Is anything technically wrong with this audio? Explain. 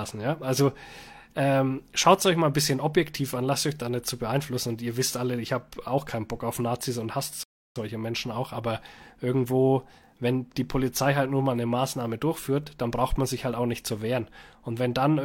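Yes. From 7.43 to 7.76 s there is a rebuffering stall: the player exhausted its downloaded audio and paused until more data arrived. The speech drops to silence for about 0.32 s, then picks up exactly where it stopped, with nothing missing but extra time inserted.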